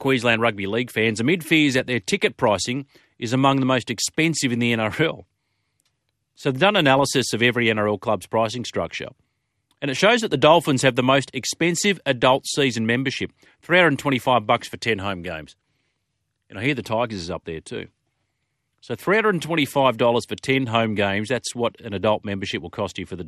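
MP2 compression damage runs through this whole speech clip. The speech sounds dull, with a gurgling, granular roughness and upper frequencies that flicker in and out. The likely cause is MPEG Layer II coding at a low bitrate, which fits roughly 80 kbps. Starved of bits, it mutes whole upper sub-bands and coarsely quantises the rest.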